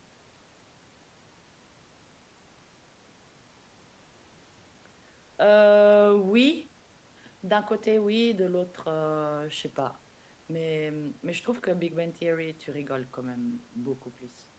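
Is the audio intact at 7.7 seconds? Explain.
Yes, the speech at 7.7 seconds is intact, with no dropout, glitch or other fault at that moment.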